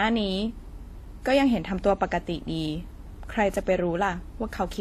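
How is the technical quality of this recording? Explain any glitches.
The speech is compromised throughout by layered lossy-coding damage. Across the whole clip there is transcoding between lossy codecs, likely an HE-AAC stage re-encoded as WMA. Unlike single-codec artefacts, two distinct sets of artefacts overlap, and nothing sounds above 14.9 kHz.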